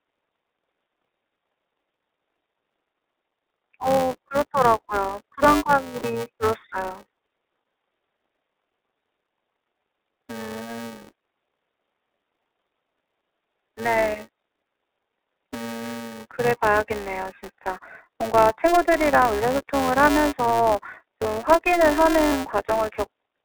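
The whole clip runs through the iLBC codec. The band sits at roughly 300 Hz to 3.6 kHz, and the speech carries that slightly rough, synthetic edge you get from coding each 20 ms frame on its own. The damage is plainly audible, and the quality fits the 15.2 kbps mode.

On top of that, a filter is restarted on every block. It loses its state and starts each block from silence, so every block opens with a tiny transient. You hear it as a steady buzz around 345 Hz that rises and falls with the level, which fits a 128-sample block.

Then there are lost iLBC frames at 5.98–6.06 s (60 ms), 14.60–14.62 s (20 ms), 19.37–19.40 s (40 ms) and 22.29–22.34 s (40 ms). In each gap the decoder repeats the last pitch cycle with some noise mixed in, so it sounds like a brief held, buzzy vowel. The speech snaps back straight afterwards.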